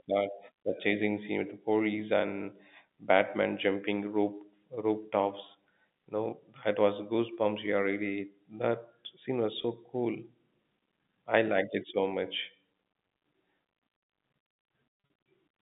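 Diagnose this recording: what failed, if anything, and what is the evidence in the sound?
Network packet loss with pitch repetition. Just after "scene was", 9.62 to 9.64 s has a 20 ms buzzy hold, which fits one lost packet bridged by repeating the last pitch period. From 14.94 to 15.10 s, 120 ms of scattered losses, the longest 40 ms, cause repeated stuttering holds.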